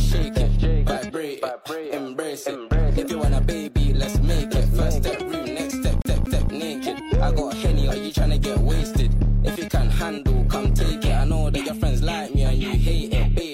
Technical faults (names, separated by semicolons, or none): CD stuck on one turn